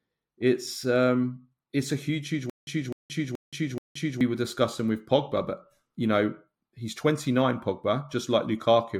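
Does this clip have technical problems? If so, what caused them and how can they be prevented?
Yes. From 2.50 to 4.21 s, just after "it's a huge huge" and before "were discussing with", there is a stutter with silent gaps: a 254 ms burst of speech repeats four times, each followed by 174 ms of digital silence, a 428 ms cycle. The likely cause is a stalled stream replaying its last buffered fragment at each retry and then running dry. On a waveform and spectrogram, identical blocks alternate with flat, empty bands. Larger playback buffers and network jitter buffering would prevent it.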